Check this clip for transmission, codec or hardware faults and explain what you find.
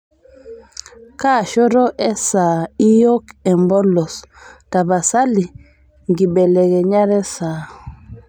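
Nothing faulty turns up anywhere in this speech recording.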